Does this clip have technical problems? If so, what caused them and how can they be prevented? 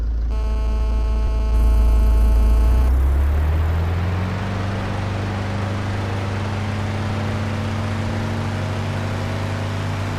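Yes. GSM phone buzz runs from 0.31 to 2.89 s: a nearby 2G phone on a call pulses 216.7 times a second, and the audio circuitry rectifies this into a steady, raspy buzz about 15 dB below the signal. A spectrogram shows stacked 217 Hz harmonics, and the waveform a regular pulse train. Keep phones switched off or well away from the recording equipment.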